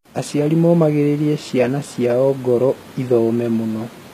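Across the whole clip the treble sounds gritty and lispy and stops at 14.9 kHz, likely HE-AAC compression rebuilding the highs from copied lower bands.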